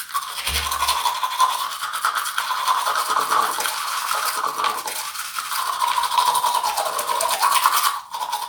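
A recording of everyday sounds with a doubled audio track from 2.40 s to 7.36 s. A second full-band copy of the sound runs about one and a half seconds behind the first. It is roughly as loud as the original. The copy has no decay or room colour, so it is not an echo. It cuts in and out abruptly at those times. The likely cause is a second capture path with extra delay, or two misaligned copies left in an edit.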